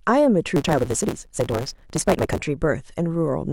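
From 0.56 to 2.38 s, a block size mismatch (truncated) discards block ends: speech runs 1.6 times fast, buzzing at 138 Hz, seen as vertical spectrogram stripes.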